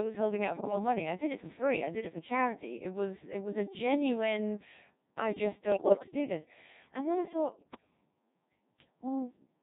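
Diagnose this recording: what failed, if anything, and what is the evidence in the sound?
The whole clip is heavily robotic and buzzy: the speech sounds assembled from tones rather than recorded. That is the Codec 2 vocoder, a codec-stage fault. Codec 2 transmits only pitch, voicing, energy and a coarse spectral envelope, and the decoder rebuilds the voice from sine waves, discarding the original waveform. The density of the artefacts fits its 1.6 kbit/s mode.

Three short bursts of bit errors on digital voice radio break through at the network stage, heard as abrupt jumps in pitch, level and tone colour that turn into warbling, bleepy gibberish. The first runs from 0.55 to 0.75 s, between "was holding out" and "money i did it". The second runs from 5.72 to 6.08 s, between "a genuine i just" and "do this and then". The third runs from 7.52 to 7.90 s, after "this and then i". Each bit sets a parameter for a whole frame, so corrupted bits make the synthesiser produce wrong pitch and spectrum. 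The first burst is consistent with around 5 percent of bits flipped, the later two with around 10 percent.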